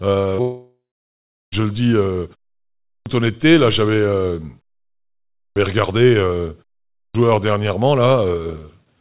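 At 0.35 to 0.41 s, short concealed packet loss: about 30 ms never arrived and was patched by extending the previous sound, leaving a brief smear rather than a gap.

From 0.41 to 1.55 s comes a long network dropout, likely from audio not arriving for about 1.1 s. A fading synthetic buzz or hiss continues the last sound before roughly 0.73 s of silence. Unlike the short loss, over a second of real audio is skipped.

At 2.86, 5.37 and 6.94 s, speech resumes after pauses of 0.59, 0.84 and 0.39 s with a clipped start after a pause. The waking output device swallows about 0.2 s each time, so onsets begin abruptly. The muted pauses themselves cost no speech, and the narrow band with nothing above 4 kHz fits the G.711 call path.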